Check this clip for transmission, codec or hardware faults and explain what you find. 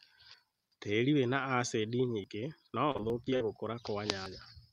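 There are two kinds of fault in this speech clip, and they overlap a bit in the middle.

The first kind is a dropped buffer (overrun), heard at 2.24 s, 3.1 s and 4.26 s. Each one is a jump where the speech skips forward with no silence in between. The ones at 2.24 s and 4.26 s skip roughly 70 ms, and the one at 3.1 s skips closer to 20 ms. The likely cause is the capture side falling behind, so the hardware wrote over samples before the software collected them.

The second is repeated packet loss (robotic sound), from 2.91 s to 3.42 s. In that half second there are what sound like five short holes, the longest about 42 ms. Each one is papered over by stretching the last bit of sound forward, so about a quarter of the stretch is concealment rather than real audio. The result is choppy speech with small pieces missing. The 3.1 s skip lands right inside this stretch.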